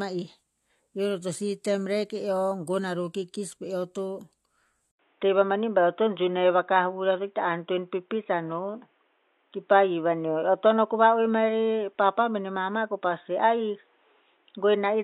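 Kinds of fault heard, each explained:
Input switched to a poorer device: at 4.91 s the speech drops out for 80 ms, then returns duller and boxier, with nothing above 3.8 kHz, a level shift of around 5 dB, and a new background noise floor sitting roughly 45 dB under the signal. The narrowed band and changed tone persist to the end of the clip, which points to the recording likely having moved to a different, band-limited microphone or a headset call profile.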